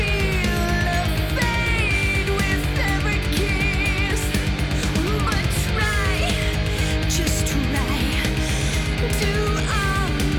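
Nothing stood out on listening to this recording.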